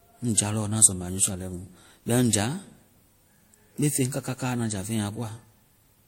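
A speech clip that was likely transcoded between lossy codecs, first through something like 56 kbit/s MP3 and then 64 kbit/s WMA. Throughout, nothing remains above 16.5 kHz, and the artefacts of the first encode are heard layered with the second codec's own.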